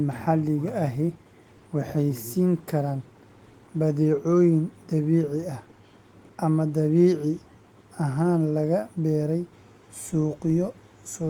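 No technical faults are audible.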